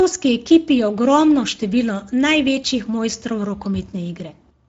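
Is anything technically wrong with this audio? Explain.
Yes. Speex codec damage runs through the whole speech clip and is plainly audible. Speex is a CELP coder that rebuilds speech from a predicted spectral envelope and a coded excitation signal. The excitation gets too few bits, so the voice comes out noisy and hoarse, which fits a setting around 16.8 kbps. On a spectrogram, harmonics look smeared and grainy. The waveform shows rough, buzzy periods rather than clean glottal pulses.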